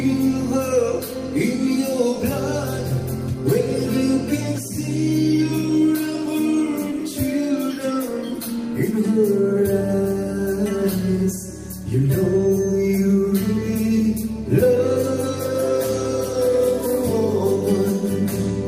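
No technical faults can be heard anywhere here.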